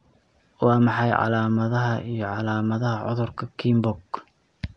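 Speech, with Nellymoser compression running the whole way: a rough, hissy halo and a smeared, underwater feel, nothing above about 10.6 kHz. It's likely the old Flash Asao codec at a rate fitting 44 kbps, starving weak bands and filling them with noise.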